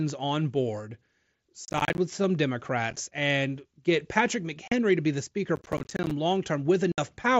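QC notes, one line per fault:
1.65–1.98 s and 5.56–6.11 s, processor overload crackle: buffers of roughly 10 ms repeatedly miss their deadline and drop to silence, leaving a gritty tearing over the speech. The waveform shows rapid hard-edged dropouts, and the spectrogram shows thin vertical broadband streaks across both spans.
2.91–2.97 s, 4.68–4.72 s, 6.92–6.98 s, unconcealed Bluetooth headset packet loss: lost headset packets leave abrupt holes of 22.5, 37.5 and 60 ms. The first is scattered over 60 ms in pieces no longer than 7.5 ms, which fits 7.5 ms packets. The waveform shows flat gaps with abrupt edges, and the spectrogram shows blank columns.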